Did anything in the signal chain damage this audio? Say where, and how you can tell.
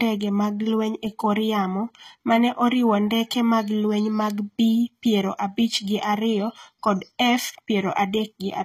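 Yes, at the codec stage, throughout the speech. The sibilants sound gritty and lispy, and nothing sits above 14.9 kHz. This is likely HE-AAC compression at a rate near 20 kbps. The upper band is rebuilt from copied lower bands, so its harmonics misalign.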